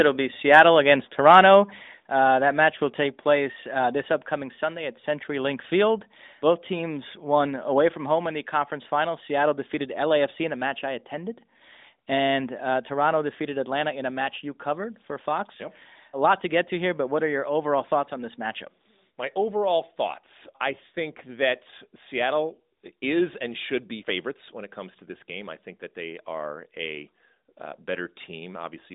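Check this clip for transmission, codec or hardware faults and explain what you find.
Two faults show up early in the clip, both on the capture side, heard through a narrowband phone-style channel that passes roughly 200 Hz to 3.7 kHz.

From 1.29 to 1.55 s there is microphone overload, likely caused by the microphone's input level being set too high. The loudest peaks run about 2 dB past the converter's ceiling, flattening their tops on a small share of samples and giving those moments a brief harsh, crackly edge.

At 2.04 s the microphone volume steps down by about 5 dB, likely the call software reacting to the overload just before and cutting the device's input gain in one move. Both the speech and the background drop abruptly to a lower level at that point and stay there.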